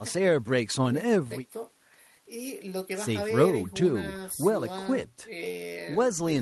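No technical faults can be heard anywhere in this speech recording.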